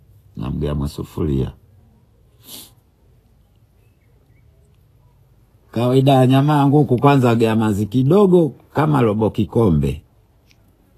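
From start to finish the speech carries a grainy, hissy texture, and nothing reaches above 14.2 kHz. The likely cause is Vorbis compression at a low rate, consistent with roughly 34 kbps: the treble residue is quantised so coarsely that fine detail turns into noise-like fizz, tones sound roughened, and consonant onsets blur. Unlike a simple low-pass filter, the remaining top end is noisy rather than clean, and it lacks MP3's metallic, warbling swirl.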